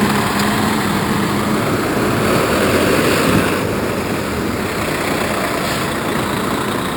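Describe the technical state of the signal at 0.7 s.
At 0.7 s you're hearing the same imaging from sample-and-hold upsampling that runs through the whole clip. The audio was brought up from 12 kHz to 48 kHz by simply repeating each sample with no smoothing filter, so mirrored copies of the spectrum sit around multiples of 12 kHz. The lowest one fills roughly 6 to 12 kHz at about 16 dB below the signal, giving a bright metallic fizz that tracks the level and slides against the pitch.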